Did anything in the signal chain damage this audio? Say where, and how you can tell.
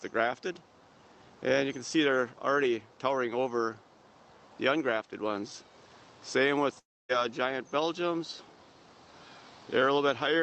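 Yes. Network stage: at 6.79–7.12 s the audio drops out for about 0.3 s, with concealment fading into silence before it resumes, likely a long network dropout that lost packets.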